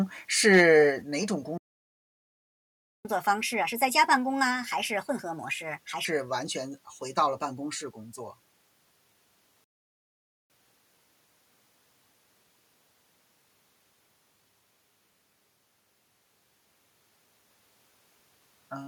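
From 0.53 to 0.62 s the speech peaks flatten into a harsh crackle, likely microphone overload, with the input driven about 3 dB past the converter's limit. At 1.02 s the level drops abruptly by about 4 dB, likely a microphone volume step-down by the call software reacting to that clipping. The audio then cuts to silence from 1.58 to 3.05 s, a 1.47 s playback stall, likely from the player running out of data. From 3.05 to 6.05 s the player catches up at higher speed, running 1.25 times faster and raising pitch by about four semitones before settling. A second stall silences 9.64 to 10.5 s for 0.86 s, followed by catch-up at 1.15 times speed, about two semitones sharp, until 13.5 s.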